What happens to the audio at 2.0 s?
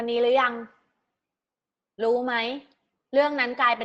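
Nothing goes wrong at 2.0 s: the speech passes through the call path there without any dropout, glitch or other disturbance.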